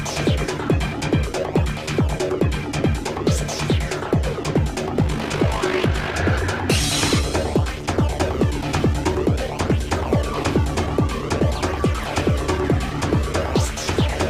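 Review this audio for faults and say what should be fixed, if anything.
From 4.98 to 6.15 s there is overlap-add ripple. The audio was split into windowed frames and rejoined with windows that don't sum to constant gain, so the level swings by about 6 dB once per frame, around 50 times a second. To prevent it, pair the window shape and hop size so the overlap sums to constant gain, or divide by the summed window.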